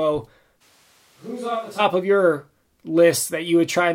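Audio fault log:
0.63 to 1.78 s, switch to a distant microphone: the voice abruptly goes roomy and hollow, loses bass, and drops roughly 10 dB, with room noise rising to about 30 dB under the speech. The close mic likely cut out, leaving a far one, then it snaps back.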